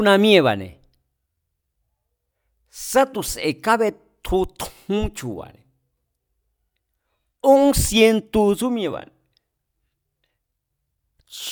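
No technical faults can be heard.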